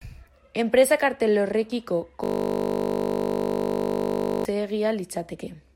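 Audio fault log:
2.24–4.45 s, system hang loop: the playback froze and the hardware kept replaying one 20 ms slice of the speech, over a hundred times, producing a steady 50 Hz buzz. The waveform shows an identical repeating cycle, and the spectrogram shows flat horizontal harmonics spaced 50 Hz apart.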